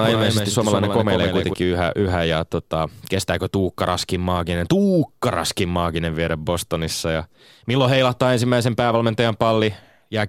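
The clip is speech with a doubled audio track from the start until 1.54 s. A second full-band copy trails the original by about 150 ms, roughly 5 dB quieter, with no decay or room colour. It stops abruptly just before "yhä yhä ja tota". The likely cause is the signal being captured twice, once through a slower path.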